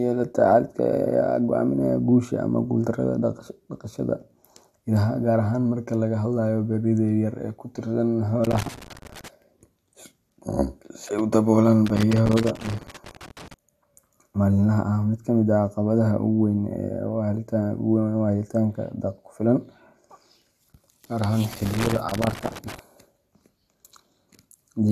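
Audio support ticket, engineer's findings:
Loose connector crackle, speech, 8.44–9.28 s, 11.86–13.54 s, 21.53–22.79 s. Worn or dirty contact making and breaking as the cable moves, chopping the signal. Irregular scratchy bursts, unlike the evenly spaced clicks of a buffer fault. Reseat or replace the cable and connector.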